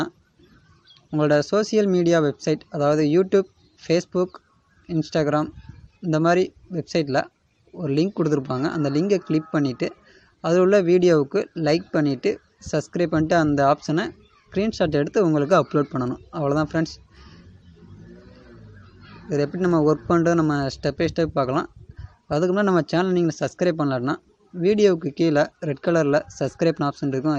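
Throughout, the audio sounds dull, with upper bands flickering in and out and a gurgling, granular roughness on what remains. This is likely MP2 compression, where MPEG Layer II runs short of bits at a rate around 80 kbps, switches off upper sub-bands and quantises the rest coarsely.

From 24.94 to 25.01 s comes a short burst of DAB burbling. Residual bit errors, a small fraction of a percent, got past error correction, consistent with two corrupted frames. Wrong samples put short blips of noise into single sub-bands.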